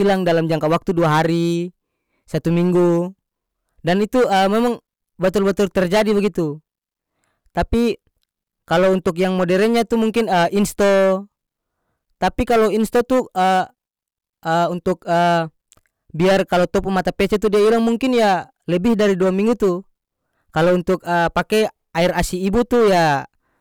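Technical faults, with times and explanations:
Throughout, hard clipping: the speech is driven about 14 dB past the level the signal path can carry, so the peaks are sliced off flat and roughly a tenth of the samples sit flattened at the clipping level. Every loud syllable comes out with a harsh, buzzy fuzz rather than occasional crackle. On the waveform the tops and bottoms form flat plateaus at the clipping level; the spectrogram shows dense harmonic energy smeared upward into the high kHz range on each loud stretch.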